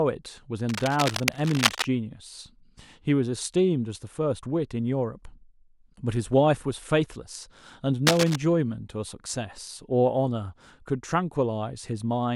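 From 0.69 to 1.85 s, a burst of cable scratch noise rustles over the speech at a level only a little below it. A second, shorter burst from 8.07 to 8.36 s is as loud as the speech itself. The likely cause is a worn cable or connector being moved, its contact resistance jumping rapidly. Unlike steady hiss or isolated clicks, the noise is dense, ragged and uneven, and it stops when the movement stops.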